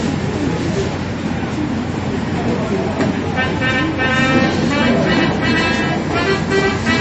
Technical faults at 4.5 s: MP3 compression

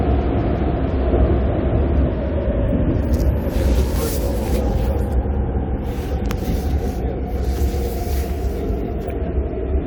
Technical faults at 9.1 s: corrupt frame decoded

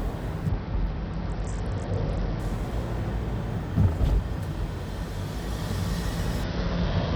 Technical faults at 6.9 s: Bluetooth SBC bit pool drop

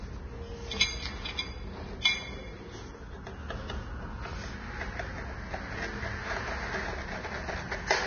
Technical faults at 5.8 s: Vorbis compression

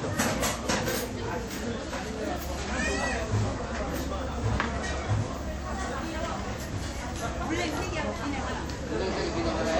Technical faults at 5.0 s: WMA compression

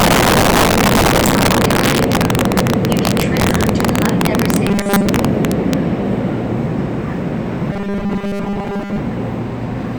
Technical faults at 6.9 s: integer overflow

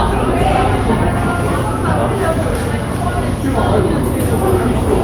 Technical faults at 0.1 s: none

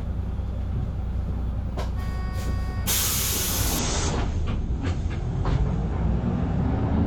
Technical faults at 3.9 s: adaptive stream at a lower bitrate

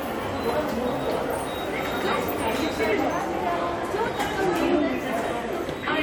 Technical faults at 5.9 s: compressed frames skipped

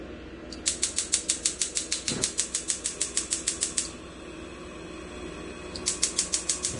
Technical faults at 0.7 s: Vorbis compression; pre-echo

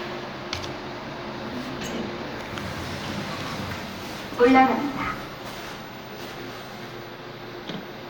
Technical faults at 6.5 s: none

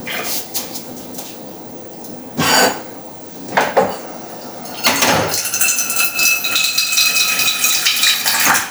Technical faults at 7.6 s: gain pumping; doubled audio track

